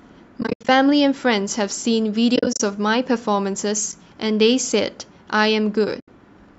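Speech with repeated AAC frame loss with muting: short soft-edged dropouts where the decoder zeroed lost frames and the overlapping windows faded the sound out and back in. Between 0.41 and 0.69 s and between 2.36 and 2.60 s the gaps are clustered and broken, the longest under a tenth of a second. A single brief hole falls at 3.92 s, and a solid 80 ms gap runs from 6.00 to 6.08 s. The 10 ms grain of the gaps fits the short frames of the clip's likely low-delay AAC coding.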